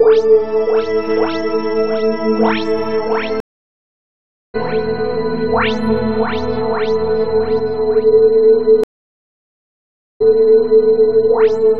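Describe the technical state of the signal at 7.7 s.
At 7.7 s the music plays through intact, with no audible fault at that moment.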